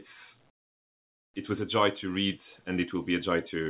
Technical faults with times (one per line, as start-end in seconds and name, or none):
0.50-1.34 comfort noise in place of the background